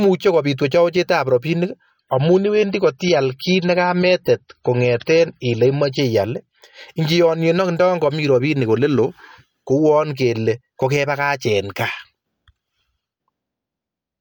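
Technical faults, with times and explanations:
2.01–6.01 s, adaptive stream at a lower bitrate: after "kopiit wechowechetap rapinik" the speech abruptly turns swirly with no gap, which fits a slowed connection forcing a drop from 128 to 32 kbit/s MP3.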